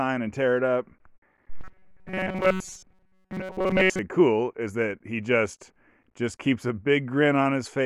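From 1.57 to 3.99 s, new audio likely stopped arriving fast enough, so the playback path kept repeating its last short buffer of roughly 5.3 ms while the real signal was skipped, for most of that stretch. This is robotic sound from repeated short buffers: the looping stamps a fixed pitch of 188 Hz on the speech, turning it into a rigid, metallic buzz that only loosely tracks the original syllables.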